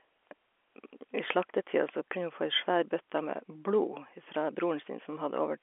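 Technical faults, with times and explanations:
The speech comes through a G.711 telephone path, consistent with 64 kbps A-law coding, with the sound confined to the usual line band of roughly 300 Hz to 3.4 kHz and any coding noise staying faint beneath the signal.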